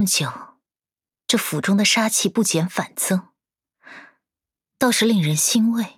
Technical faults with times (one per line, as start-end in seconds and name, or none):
none